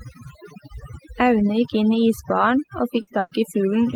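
Speech, with overdone noise removal across the whole thing: the background drops and breaks up into twinkling specks. Then there are two bursts of packet loss, at 3.01 to 3.10 s and 3.19 to 3.34 s. The receiver stretches the last sound over about 60 ms and then 120 ms while fading it, and the audio picks up further on with those stretches gone.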